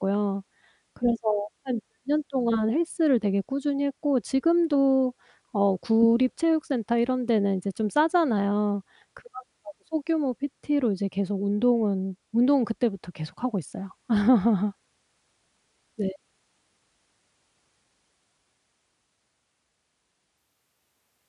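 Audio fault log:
20.38–21.29 s: wrong sample rate. The closing speech runs 1.45 times too fast and 6.45 semitones too high, which fits 22 kHz audio played at 32 kHz without conversion. On a spectrogram, harmonics and formants jump upward and syllables squeeze horizontally.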